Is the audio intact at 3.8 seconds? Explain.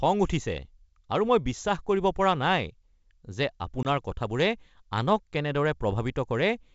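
No. Packet loss on an ADPCM call cuts a hard-edged gap from 3.83 to 3.86 s, as a couple of packets drop out and silence fills their place. The decoder's predictor and step size then lose sync with the sender's, so the speech resumes slightly distorted and settles within tens of milliseconds.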